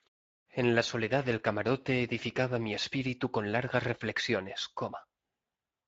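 From start to finish, the speech carries plainly audible Speex codec damage, at a rate which fits a setting of about 16.8 kbps. Speex is a CELP coder. It rebuilds each short frame from a vocal-tract filter driven by a coded excitation signal. At this rate the excitation gets too few bits, so the voice sounds noisy and hoarse. The muted pauses fade cleanly to silence between phrases, and the sound returns in time for the next word.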